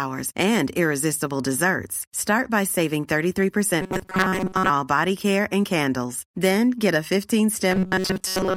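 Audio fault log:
3.82 to 4.71 s and 7.71 s to the end: robotic sound from repeated short buffers. The speech becomes a rigid, metallic buzz at 188 Hz. Most of the audio is skipped, likely because a roughly 5 ms chunk is replayed while new data is late. The first stretch ends just before "body care and candles".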